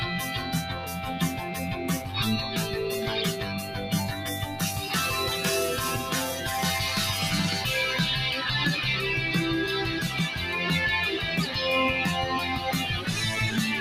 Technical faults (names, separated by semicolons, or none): noise suppressor applied to music or sounds; sound cut by the noise suppressor